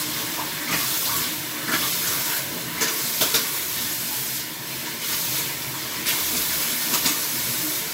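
No technical faults can be heard anywhere in this audio.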